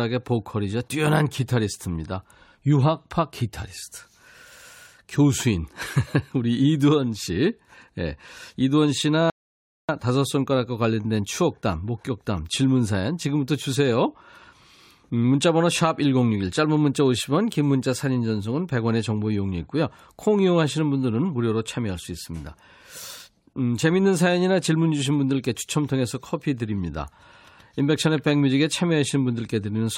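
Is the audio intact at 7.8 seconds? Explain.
Yes, the audio is intact at 7.8 seconds, with no dropout, click, distortion or other fault audible there.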